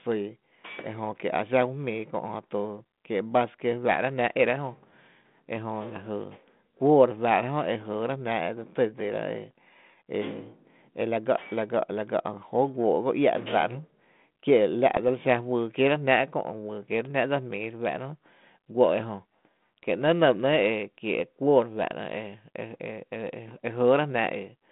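Bit errors on an ADPCM link appear from 14.95 to 14.99 s as a short rough pop with a brief level jump. Flipped bits at a low rate, roughly 0.15 percent, knock the decoder's step size and predictor off track, so the disturbance rings on for some milliseconds within the 150 Hz to 3.6 kHz telephone band of the 32 kbit/s G.726 link.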